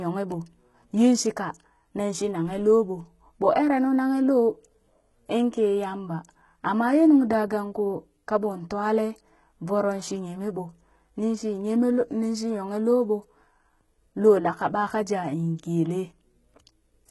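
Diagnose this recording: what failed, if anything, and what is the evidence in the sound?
Throughout the speech the s sounds come out gritty and metallic, with a lispy edge, and the treble, though present, sounds synthetic rather than airy. Nothing reaches above about 11.8 kHz. The stage is the codec, likely HE-AAC compression at a heavy setting that fits roughly 16 kbps: the lower spectrum is coded directly and the upper band is rebuilt by copying lower bands upward, so its harmonics fail to line up with the originals.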